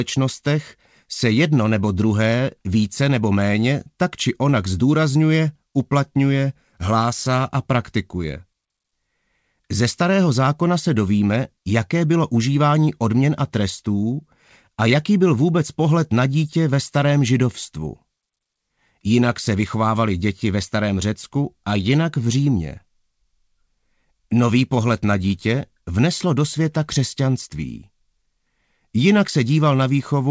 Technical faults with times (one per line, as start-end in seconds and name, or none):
none